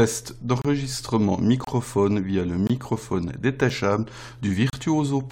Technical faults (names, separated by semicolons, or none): gap between stream segments